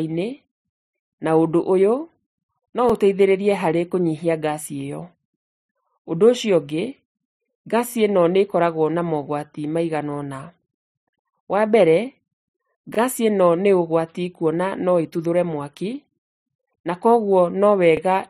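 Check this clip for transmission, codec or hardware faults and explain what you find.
The speech has a single recurring fault, overlapping chunks, at 2.90, 7.92, 12.95 and 17.97 s. Each chunk of about 5 s begins roughly 25 ms before the previous one ended, so that sliver of audio plays twice at every join, heard as a brief click or stutter on a steady 5 s rhythm. On a waveform, each join shows a 25 ms segment duplicated back to back. A spectrogram shows a thin vertical seam with the same brief pattern repeated on either side of it.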